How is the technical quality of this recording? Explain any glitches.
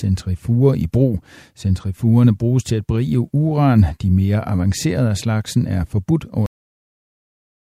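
The recording has one clear fault, a cut-off end. At 6.46 s, right after "af slagsen er forbudt", the speech stops mid-sound because the final buffers were never written. The last 1.2 s are flat digital silence, a hard vertical edge on the waveform and an abrupt blank in the spectrogram.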